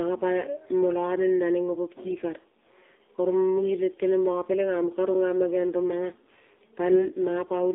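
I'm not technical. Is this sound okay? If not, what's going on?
No. The whole recording went through an AMR narrowband mobile codec, the squeeze an old mobile call uses. It sounds thin, muffled and noticeably buzzy. From 2.06 to 2.15 s, AMR bit errors hit. Corrupted call data makes the voice briefly turn hoarse, scratchy and gargly.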